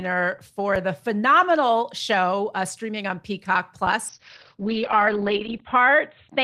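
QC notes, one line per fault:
0.75 s: underrun with held sample. The output buffer ran dry for about 4.4 ms and the converter held its last value, so the waveform freezes flat. About 4 ms of live audio were lost during the gap.
4.09–6.43 s: call bitrate drop. The encoder was starved of bits, so the speech turns rough and watery, and the top end is cut from 20 kHz to 4 kHz for a muffled sound. The worst stretch lasts 1.58 s and fits a fall from about 32 to 11 kbps. Unlike packet loss, it has no gaps, only coarser coding.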